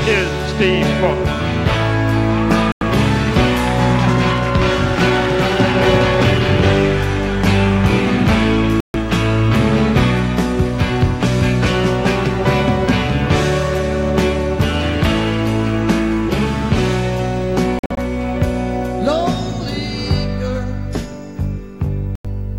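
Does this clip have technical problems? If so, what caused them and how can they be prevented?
Yes. Bluetooth dropouts cut the audio at 2.72 s, 8.80 s, 17.79 s (several short gaps over about 0.19 s, the longest about 46 ms) and 22.15 s, each lasting roughly 0.1 to 0.14 s. These silences are likely caused by wireless packets arriving late and being discarded, with playback resuming further on as though it had continued. Keeping the headphones close to the source, clear of obstructions and away from crowded 2.4 GHz traffic prevents this.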